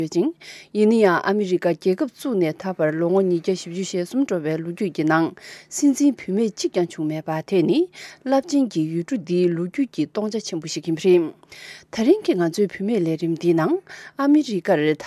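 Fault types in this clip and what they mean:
No technical faults are audible.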